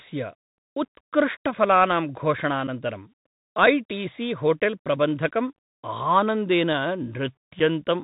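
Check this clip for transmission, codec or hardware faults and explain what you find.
Two faults are present: the whole clip has passed through a Bluetooth CVSD headset codec, and there are three brief unconcealed Bluetooth headset packet losses.

Bluetooth CVSD headset codec, throughout: the speech was coded as single up-or-down bits with an adapting step, which fits a 64 kbps narrowband link. Nothing above 4 kHz survives, so the voice sounds boxed in. Sibilants turn scratchy, loud high sounds distort, and a granular hiss sits underneath.

Unconcealed Bluetooth headset packet loss at 2.67 s, 5.57 s and 7.59 s: voice packets between headset and phone went missing and were not concealed. The first and last gaps are about 7.5 ms, consistent with a couple of packets, and the middle one is 18.8 ms, suggesting several packets. Each is a sharp-edged hole, followed by a moment of quieter speech.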